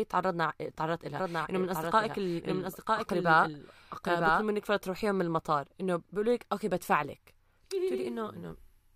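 From 1.17 to 4.43 s a second copy of the speech trails about a second behind, somewhat quieter, starting and stopping abruptly: a doubled audio track, likely from a duplicate capture path.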